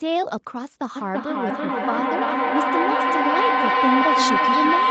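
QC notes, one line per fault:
0.96 s to end: feedback howl. The microphone picks up a nearby loudspeaker on the same call, and each trip round the loop comes back louder. The build-up narrows to a tone near 1 kHz, with the loop repeating roughly every 300 ms, and ends about 3 dB above the speech.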